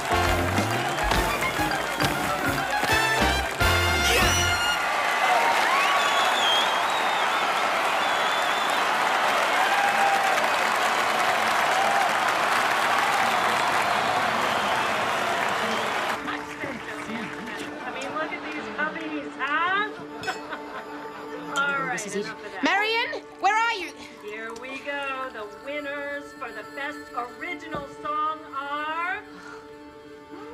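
At 12.47 s the sound suddenly runs fast and sharp. It stays detuned until 13.33 s, then snaps back to normal speed and pitch. The playback rate rises by 5.56 percent, which raises the pitch by 93.6 cents, almost a semitone. This is a drift correction step. Software matching two clocks likely changed the rate in one jump to drain its buffer. Speed and pitch move together, so the shift is clearest on sustained tones.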